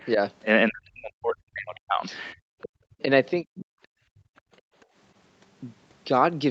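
Speech suppressed in double talk runs from 0.69 to 2.03 s. The talker's speech sinks by as much as roughly 40 dB. This is likely an echo canceller that could not separate the near talker from loudspeaker echo and so turned both down.

The other side's voice leaking through appears from 2.61 to 2.69 s as a brief scrap about 20 dB below the speech. Residual loudspeaker sound likely got past the canceller into the microphone.

Speech suppressed in double talk returns from 2.87 to 3.10 s and again from 3.42 to 3.66 s, with dips of similar depth. The leak recurs inside the second dip, at 3.56 to 3.65 s.

Background gated by the echo canceller follows from 3.94 to 4.75 s. The room sound drops by about 28 dB while the canceller clamps the microphone and comes back once it releases. A very faint leaked fragment, some 40 dB down, sits within this gap at 4.37 to 4.41 s.

The call's band-limiting leaves nothing above 8 kHz.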